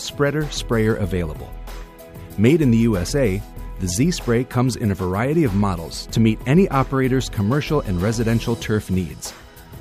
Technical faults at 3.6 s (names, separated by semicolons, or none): none